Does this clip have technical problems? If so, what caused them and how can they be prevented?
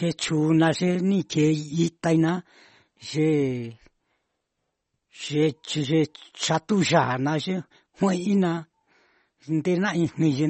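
Yes. MP3 compression runs throughout: nothing above 8.3 kHz, with watery, swirling speech, likely from a low bitrate near 32 kbps starving the encoder. Prevent it by encoding at a higher bitrate or keeping a lossless copy.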